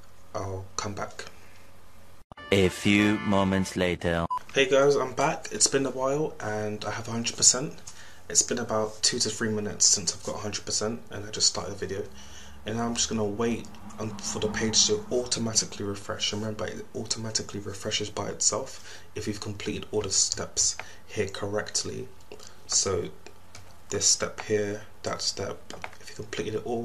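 No technical faults can be heard anywhere in the audio. Nothing in it calls for a time mark or an explanation.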